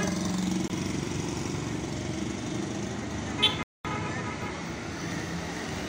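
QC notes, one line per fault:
0.68 s, block of digital silence: a 20 ms block of silence, with abrupt edges; the waveform shows a flat gap and the spectrogram a thin blank column.
3.63–3.85 s, playback stall: sound halts mid-flow for 218 ms before resuming, likely from the player starving for data; the waveform shows a flat stretch and the spectrogram a wide empty band.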